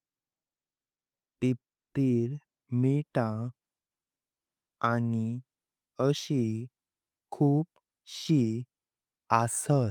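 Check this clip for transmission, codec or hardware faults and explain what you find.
Nothing in the recording points to a technical fault. The speech runs without any break, glitch or disturbance a listener could single out.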